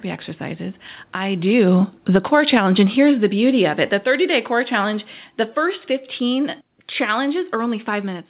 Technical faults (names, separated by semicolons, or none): automatic gain falling